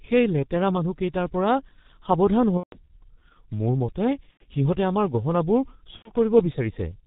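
Throughout, the G.723.1 codec at 6.3 kbit/s heavily cuts everything above 4 kHz, leaving steady muffled, hoarse speech with smeared consonants rather than intermittent damage. At 2.57–2.77 s, 4.31–4.43 s and 5.96–6.12 s, VoIP packet loss concealed by the speech codec fills the gaps with a fading extrapolated tone or noise that is muted from the third lost frame, and the distortion lingers briefly afterwards.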